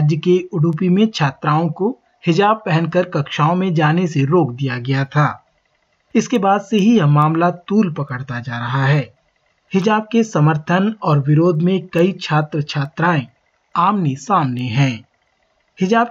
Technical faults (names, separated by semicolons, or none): word clock ticks